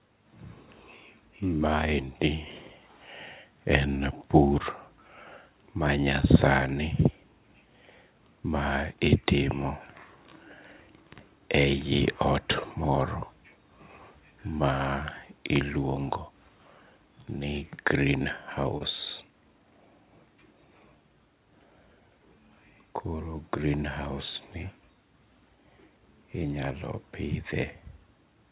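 At 18.78 to 18.82 s there is a short concealed packet loss. About 20 ms of the call arrived too late for the decoder, so the receiver extended the preceding sound to cover the gap before blending back, leaving a brief smear in speech otherwise band-limited below 4 kHz, consistent with G.711 mu-law.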